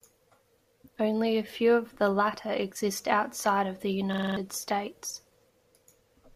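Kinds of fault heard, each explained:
System hang loop: the machine stalled while the sound hardware kept replaying its ring buffer. Just after "exist outside of the", one 46 ms slice repeats five times at 21.5 Hz. It's a rattly stutter that fits a 2048-sample buffer and swallows roughly a fifth of a second.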